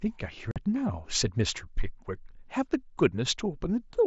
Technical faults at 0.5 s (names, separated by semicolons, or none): unconcealed Bluetooth headset packet loss